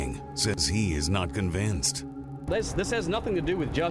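Throughout, the resampler restarted on every block, converting 48 kHz to 24 kHz in 40 ms pieces, leaving edge errors heard as steady 25 Hz ticking under the sound.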